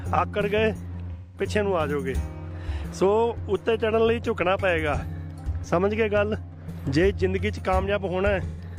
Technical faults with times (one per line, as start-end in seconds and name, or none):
1.12-1.44 AAC frame loss with concealment
4.96-5.02 AAC frame loss with concealment
8.46-8.62 AAC frame loss with concealment